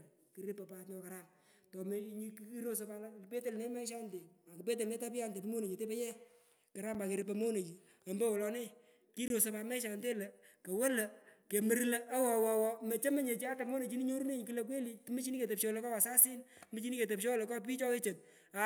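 At 6.94 s the program likely failed to fill its output buffer in time, and a block of digital silence about 5.3 ms long, consistent with a 256-sample buffer, replaced the speech. The abrupt drop to zero and return produce a sharp tick. The same fault recurs from 9.28 to 9.30 s with a longer gap of about 21 ms, matching a 1024-sample buffer. Here a brief hole opens in the speech.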